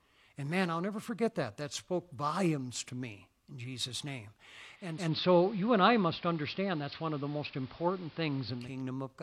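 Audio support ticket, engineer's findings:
Digital radio blending to analogue, 4.71–8.82 s: 0.39 s crossfade to AM; hiss floor roughly 25 dB down, level about 1 dB different.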